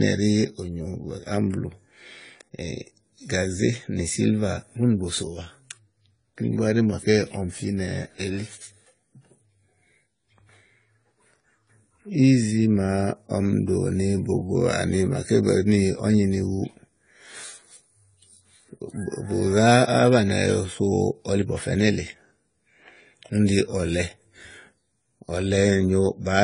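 Throughout, the speech sounds dull, smeared and warbling, with fizzy sibilants, most likely from AAC compression at a low bitrate, around 24 kbps. On a spectrogram, energy stops sharply at 10 kHz.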